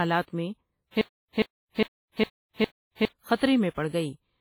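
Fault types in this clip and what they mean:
WMA compression: Throughout, the speech sounds ringing and washy, with heavy smearing and a hiss that rises and falls with the voice. The likely cause is a WMA transform encoder at a low bitrate, fitting around 24 kbps, spreading quantisation noise over long blocks and dropping weak components.
stutter with silent gaps: From 1.01 to 3.05 s, a 134 ms burst of speech repeats five times at an even pace, each time followed by 274 ms of silence, a 408 ms cycle. The likely cause is a stalled stream replaying its last fragment at each retry, so the audio for that span is lost.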